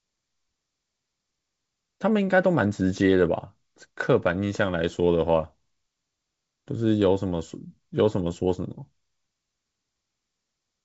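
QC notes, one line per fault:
No faults are heard anywhere in the speech. The G.722 wideband telephone coding at 64 kbit/s keeps the speech clear up to about 7 kHz, with at most a faint hiss in the upper band.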